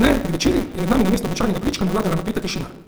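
Opus compression, likely the cause of the grainy, rough texture across the whole clip, leaves the speech sounding noisy rather than swirly. In its music-oriented CELT mode the encoder preserves each band's overall energy, but when bits run short it fills band detail with folded copies of lower bands or with noise. The result is plainly audible damage at full bandwidth, with a sound that fits a rate around 24 kbps.

Block size mismatch (truncated) also runs throughout: a steady buzz at 188 Hz sits under the speech, which moves about 1.88 times faster than normal while keeping its timbre. One stage delivers longer blocks than the next consumes, so the tail of every block is discarded. Each cut repeats at the block rate to produce the buzz, and the 188 Hz rate fits a 256-sample read.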